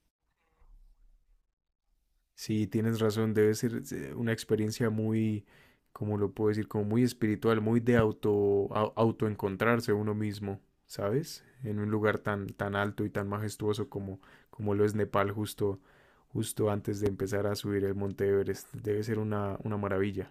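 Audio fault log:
7.99–8.02 s and 17.06–17.09 s, loud pop: two single sharp pops, the first well above the speech at roughly 15 dB and the second softer at about 10 dB, with the talking carrying on underneath. Likely a brief voltage spike from a switch, plug or static, shaped by the circuitry after it.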